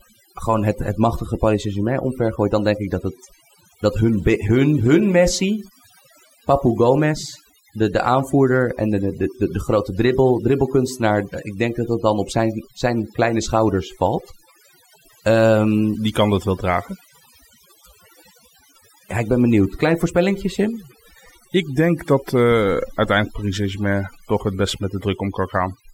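Overdone noise removal runs through the whole clip: a noise reduction stage was pushed far too hard, so any frequency band it judges close to its noise estimate is pulled down steeply or shut off entirely. The softer components of the speech fall under that threshold and are stripped away along with the noise. Between phrases the background collapses to near silence scattered with twinkling, chirpy specks.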